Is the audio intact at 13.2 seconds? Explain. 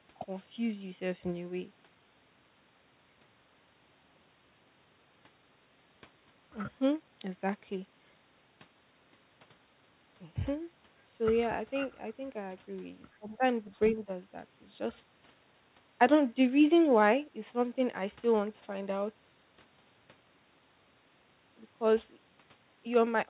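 No. From 13.18 to 13.45 s the speech dips by about 15 dB, likely speech suppressed in double talk as the echo canceller ducked both voices. This is a level dip, not a dropout to silence. Within it, 13.26 to 13.32 s, a faint second voice at roughly 35 dB below the speech is likely the other side's voice leaking through as uncancelled loudspeaker echo.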